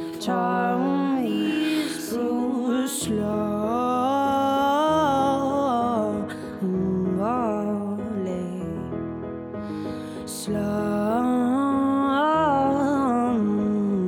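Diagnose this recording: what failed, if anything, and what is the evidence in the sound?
Nothing in this recording points to a failure at any stage of the chain. Every part of the sound holds steady, with nothing that betrays a problem in capture, conversion, transmission or playback.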